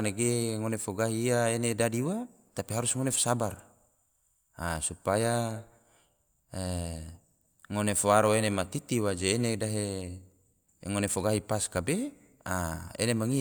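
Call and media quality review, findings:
Nothing stood out on listening to this speech recording.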